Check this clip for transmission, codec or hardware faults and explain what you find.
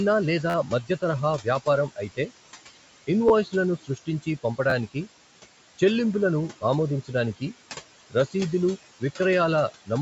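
Three faults are audible: noise suppressor artifacts throughout, four repeated-buffer stutters, and three places where the suppressor cuts into the speech.

Noise suppressor artifacts run through the whole clip. The suppressor lowers bands it judges to be steady noise by about 17 dB, frame by frame. The room noise, about 16 dB below the speech, sinks in the gaps and rises under the voice.

A repeated buffer occurs at 0.50 to 0.55 s, 3.29 to 3.31 s, 4.70 to 4.73 s and 8.96 to 8.99 s. New audio arrived late, so the last chunk of about 12 ms played again. That fits a 512-sample buffer. The first event repeats four extra times, the others twice. Each is heard as a short stutter with hard joins.

Speech cut by the noise suppressor occurs at 0.67 to 1.03 s, just before "తరహా వ్యాపారం", at 3.83 to 4.27 s, and at 8.10 to 8.34 s. The suppressor mistook parts of the speech for noise. It pulled them down by about 16, 15 and 13 dB. 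Only brief stretches are hit, but those sounds come out swallowed and faint.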